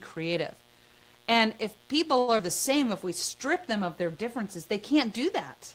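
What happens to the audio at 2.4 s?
Just after "if people", from 2.38 to 2.41 s, there is a short concealed packet loss. About 40 ms of audio never arrived. The receiver filled only about 9 ms by extending the preceding sound, then closed the gap by shortening playback delay by roughly 30 ms. The result is a quick smear and slight jump rather than the clean silent hole of a plain dropout.

Under that moment, as through the whole clip, a steady mains buzz at 60 Hz sits about 30 dB below the speech. Switching spikes twice per cycle give it a raspy, harmonic-rich edge, unlike the smooth tone of a pure hum.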